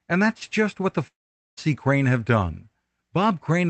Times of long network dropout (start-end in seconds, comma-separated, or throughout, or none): 1.07-1.59